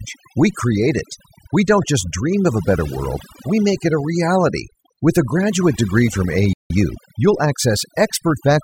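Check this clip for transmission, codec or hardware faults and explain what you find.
Three faults are audible in this speech clip: heavy-handed noise reduction over its whole length, and a dropout followed by a speeded-up recovery near the end.

Overdone noise removal runs from start to finish. A noise reduction stage set far too aggressively is pulling down any frequency band that sits close to its noise estimate, and the quieter parts of the voice are caught along with the noise. The background drops away and breaks up into twinkling, chirpy specks.

A playback stall occurs from 6.53 s to 6.70 s, straight after "a graduate degree from". The sound cuts out mid-flow for about 0.17 s and then resumes. The likely cause is the player running short of buffered data, or its audio thread being held up, so the output went silent until data arrived again.

Time-compressed catch-up follows immediately, from 6.70 s to 7.36 s. 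Having fallen behind during the stall, the player trims its backlog by cutting out small slices of audio and cross-fading across the joins. The result plays at about 1.25 times normal speed with the pitch unchanged, so the speech sounds hurried rather than higher until normal pacing returns.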